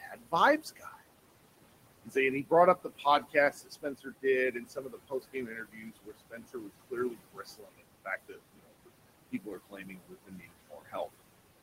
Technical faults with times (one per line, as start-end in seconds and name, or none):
0.00-11.62 noise suppressor artifacts
0.00-1.04 speech cut by the noise suppressor
2.04-8.90 speech cut by the noise suppressor
9.32-11.08 speech cut by the noise suppressor